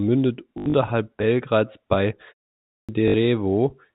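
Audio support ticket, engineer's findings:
Packet loss with last packet repeated, 0.58–0.74 s: 120 ms lost across 160 ms, longest gap 80 ms, fits 20 ms packets. Receiver replays the last packet, causing a brief 50 Hz robotic buzz.

Clipped start after a pause, 2.59–2.89 s: after a 0.34 s silence, the first 0.3 s of sound is missing. Output device sleeps in silence and wakes late, so the onset starts abruptly.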